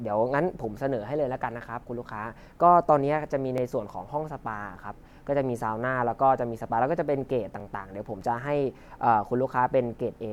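A brief stutter or click breaks the speech from 3.58 to 3.60 s and again from 7.60 to 7.63 s. These are overlapping chunks: the audio was handled in 4-second blocks, each starting about 23 ms before the previous one ended, so that slice plays twice at every join.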